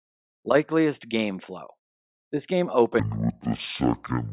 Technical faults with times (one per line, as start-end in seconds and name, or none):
3.00-4.32 wrong sample rate